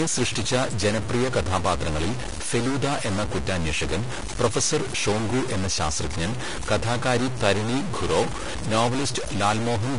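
From start to finish the speech carries a distortion that does not come and go with loudness, and the pauses between phrases fill with a gritty noise instead of falling quiet. This points to a stuck bit, most likely one data line or converter bit held at a fixed value, so roughly half the samples are pushed off by that bit's weight. On a waveform the quiet stretches show a fuzzy band where silence should be, and a spectrogram shows broadband energy smeared through the gaps.

Over the same span the audio sounds hissy and grainy, with consonant onsets softened and tonal parts of the speech roughened. This is the signature of Vorbis compression at a low setting, likely running at a bitrate around 36 kbps. Treble detail has been quantised so coarsely that it has turned into noise of similar energy. On a spectrogram the content stops cleanly at 10.6 kHz, with a flat empty region above. Below that line the upper bands look blotchy and speckled rather than finely textured.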